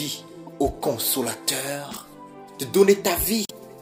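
A brief glitch breaks the sound from 0.47 to 0.49 s, and a longer one follows from 3.44 to 3.51 s. Both come from damaged data in a compressed stream: corrupted bytes make the decoder misread frames and lose sync until it finds the next header.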